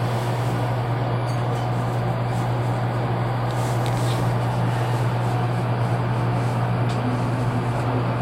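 No audible faults are present.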